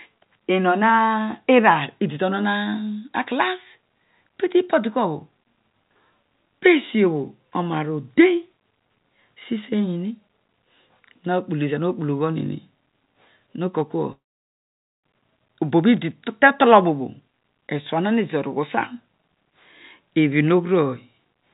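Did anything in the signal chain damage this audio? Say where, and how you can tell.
Yes. From 14.12 to 15.05 s the speech breaks off and returns later without the missing stretch, which is most likely a long network dropout. The receiver carries the last sound forward as a fading buzz, which quickly sinks to near silence for most of the 0.93 s gap. On a waveform this appears as a decaying tail, then a flat line. A spectrogram shows smeared, fading bands, then an empty gap under the 4 kHz ceiling of the narrowband call path.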